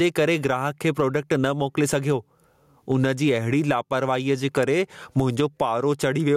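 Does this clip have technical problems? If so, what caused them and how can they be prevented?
Yes. Gain pumping runs through the whole speech clip: the level ducks under each loud syllable, a swing of around 20 dB. Unlike a noise gate, which silences the gaps, this raises them, likely from excessive input gain driving a fast compressor. Lower the microphone gain and use gentler, slower compression.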